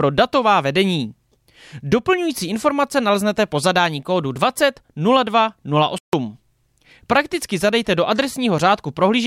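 At 5.98 s the speech cuts out in mid-flow and stays silent until 6.13 s, a gap of about 148 ms, before carrying on. This is a playback stall, likely the player running short of data or its output thread being briefly blocked.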